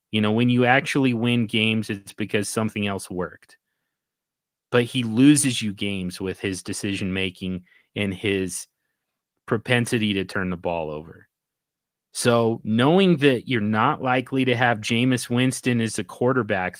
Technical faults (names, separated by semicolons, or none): none